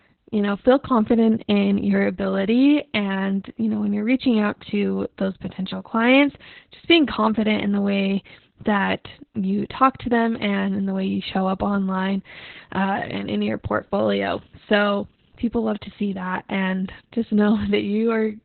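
Throughout the speech the sound is muffled, hoarse and faintly robotic, with nothing above about 4.3 kHz. This is Opus voice compression running in its SILK narrowband mode at a bitrate that fits about 8 kbps, coding the excitation so coarsely that the damage is heavy.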